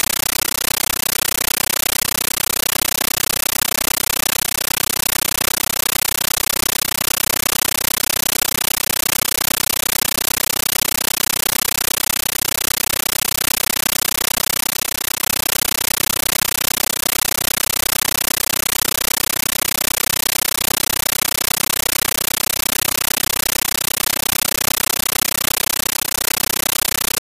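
From start to finish the sound is replaced by a compressed stream played as audio: an AC-3 (Dolby Digital) bitstream was passed to the output as plain samples instead of being decoded. Each frame becomes a 13.3 ms blast of very loud noise followed by silent padding, repeating 31.25 times a second, which fits a 640 kbps stream. Unlike steady hiss or broadband interference, this static chatters at a fixed, even rhythm.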